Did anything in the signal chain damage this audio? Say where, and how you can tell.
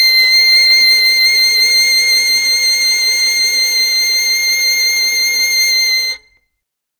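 No, nothing in the signal chain has damaged this music. At no point in the clip can any stage of the path be heard breaking down.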